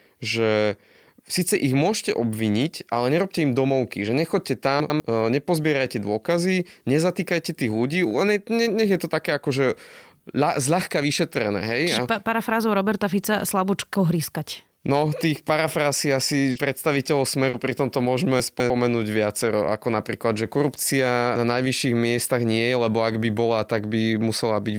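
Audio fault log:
4.80–5.00 s, chunks out of order: one 100 ms block of speech plays one block late, after the block that should follow it. No audio is lost, but the sequence is swapped, leaving three abrupt splices within 0.2 s. These are heard as a short jumbled stretch.
16.51–16.55 s and 17.49–17.53 s, short concealed packet loss: about 40 ms of speech is missing at each point, the second just before "pri tomto". The decoder bridges each hole by extending the preceding sound, carrying its pitch forward if it was voiced or substituting shaped noise if not, and then crossfades back into real audio. The result is a brief smear or wobble, and a short consonant in the gap may be lost.
16.55–16.57 s and 17.53–17.55 s, lost packet rebuilt from error correction: immediately after each concealed span, one 20 ms packet is missing but is restored from the low-bitrate redundant copy carried in the next packet. 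This copy fills the gap without silence, but it was encoded with fewer bits, so the frame sounds rougher and noisier than the surrounding audio before the decoder returns to the full-quality stream.
18.40–18.70 s, chunks out of order: one 100 ms block arrives two blocks late, so it plays after the two blocks that should follow it. This happens after "pri tomto" and before "viacero ako napríklad že". All the audio is present, but the order is scrambled across 0.3 s, and the three hard joins produce a garbled, jumbled moment.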